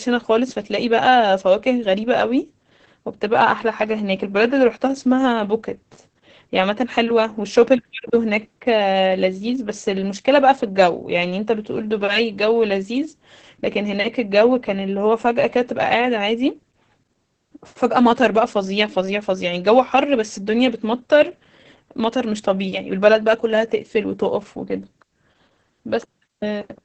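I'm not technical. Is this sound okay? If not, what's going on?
No. Throughout, the speech sounds muffled, hoarse and slightly robotic. This is heavy Opus voice compression, squeezing the voice into very little data and coding it coarsely.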